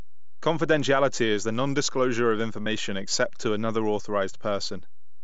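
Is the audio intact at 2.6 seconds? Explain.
No. From 2.62 to 2.66 s, between "is the nondisclosure of" and "except to another", concealed Bluetooth headset packet loss removes about 45 ms, likely a run of several headset packets. The receiver fills the gap by repeating the best-matching recent stretch of waveform, so you hear a brief buzzy tone held at full level, then a slight warble as real audio resumes. Unlike a plain dropout, there is no silence or level dip. A DC offset also runs through this moment. It is inaudible and shows only as steady energy at the very bottom of the spectrum.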